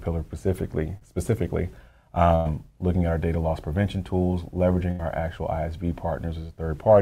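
At 0.97 to 1.03 s there is a short concealed packet loss: about 40 ms of audio never arrived in time, and the receiver covered 38 ms of it by extending the preceding sound before blending back in. It comes across as a brief smear or wobble. On a spectrogram the harmonics or noise band stretch flat and unchanging for that sliver, and the waveform shows a short, oddly regular stretch at the join.

A burst of packet loss follows at 2.35 to 2.47 s, with about 100 ms missing and 98 ms filled, and another at 4.91 to 5.01 s, with about 80 ms missing and 78 ms filled. In each, the decoder kept repeating the last sound while lowering its level, so what came before turns into a held buzz or fading hiss, and the audio resumes further along with that stretch gone. A spectrogram shows frozen, smeared bands that darken across the gap, and the waveform's envelope tapers steadily before the real signal returns.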